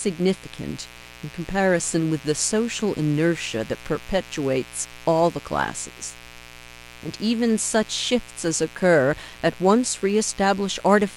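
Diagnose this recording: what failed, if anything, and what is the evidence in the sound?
The failure is in the analogue wiring: there's mains buzz under the speech for the whole clip, a steady, raspy drone sitting roughly 20 dB below the talker. It's built on 60 Hz, so you're hearing the 60 Hz fundamental plus a stack of harmonics running up into the kilohertz range. Something like a dimmer, a rectifier or a missing shield is letting sharp switching spikes into the line twice per mains cycle, and those spikes are what give it that gritty edge.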